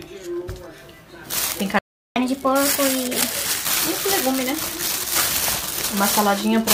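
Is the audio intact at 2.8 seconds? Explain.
No. At 2.8 s the player is in catch-up at higher speed, running from 2.16 to 3.65 s: after a stall it resamples its backlog to drain it at 1.25 times normal speed, so the sound hurries and rises about four semitones before settling back.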